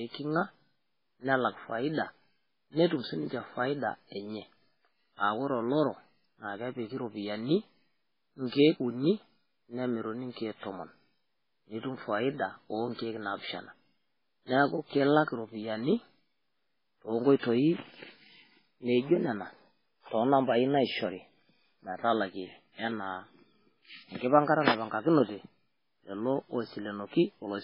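Throughout, the speech has nothing above 5.3 kHz and sounds watery and swirly, likely from heavy MP3 compression at a very low bitrate, with weak frequency lines dropping in and out.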